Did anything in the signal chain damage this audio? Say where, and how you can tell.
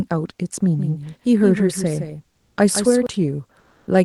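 Yes. A doubled audio track runs from 0.79 to 3.07 s. A second full-band copy of the speech trails the original by roughly 150 ms, at a level around 10 dB lower. It has no decay or room colouring, and it cuts in and out abruptly at those two points, so it is not an acoustic echo. This points to the call-processing or routing stage: most likely the same signal captured again through a slower path and mixed back in.

Comfort noise in place of the background appears twice, at the codec and transmission stage. The first is from 2.35 to 2.53 s (180 ms), where the level shifts by about 4 dB. The second is from 3.61 to 3.85 s (240 ms), with a shift of about 2 dB. In both gaps the real room background gives way to a steady, featureless hiss. This is likely discontinuous transmission, consistent with Opus DTX: the sender stopped transmitting during the pauses and the receiver filled them with synthetic noise.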